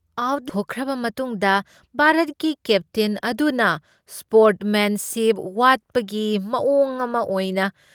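A speech recording with two playback faults close together near the start. At about 0.5 s there is a skip ahead: roughly a third of a second of audio was discarded while later packets were already queued, and playback jumps forward with no fill, joining the two sides of the cut almost directly. The timeline shifts earlier by about the same amount. From 1.04 to 1.38 s a jitter buffer speed-up follows. The receiver, holding more audio than its target, trimmed short pitch-period-sized pieces repeatedly, running the audio at about 110 % of normal speed with unchanged pitch and removing some 40 ms in total, so the phrase sounds hurried.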